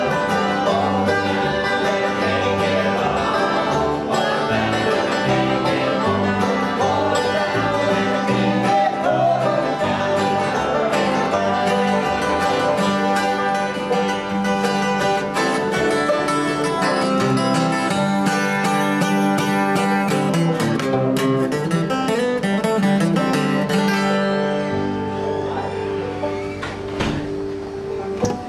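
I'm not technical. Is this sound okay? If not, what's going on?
Yes, nothing in this sound points to a technical fault, so there's nothing you need to fix.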